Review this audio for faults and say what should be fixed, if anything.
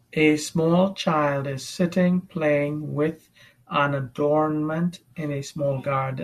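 Nothing needs fixing: the signal holds steady throughout, with no audible technical faults.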